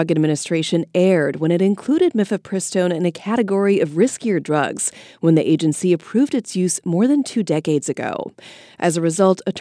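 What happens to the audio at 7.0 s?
Nothing goes wrong at 7.0 s; the speech plays through that moment intact, with no dropout, click or distortion.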